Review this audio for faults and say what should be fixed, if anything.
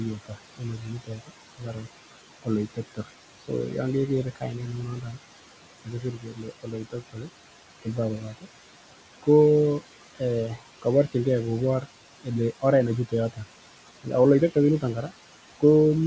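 Noise suppressor artifacts run through the whole clip: the suppressor pushes the steady room noise down by about 16 dB between phrases and lets it back under the speech. On a spectrogram the gaps show speckled, flickering patches instead of an even noise floor. Prevention: use gentler suppression with slower gain smoothing so the floor stays steady.

Speech cut by the noise suppressor happens seven times: 0.26–1.86 s, 2.43–3.5 s (just before "yon keger kainet"), 5.85–7.28 s, 7.82–8.47 s, 10.15–11.15 s, 11.81–13.39 s and 14.04–15.63 s. Quiet consonants and endings are treated as noise and dropped by about 13 to 18 dB. The worst stretch, near 6–7 s, loses around a second in total. The waveform shows word tails collapsing early, and the spectrogram shows fricative energy missing. Prevention: lower the suppression depth or raise the voice-activity sensitivity so soft speech is protected.

The room noise sits about 13 dB below the speech. 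The G.722 call path shows its expected empty band above 8 kHz.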